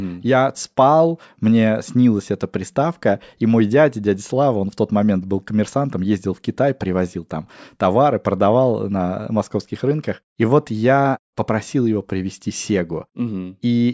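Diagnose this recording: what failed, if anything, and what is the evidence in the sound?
Nothing failed; this speech recording shows no faults.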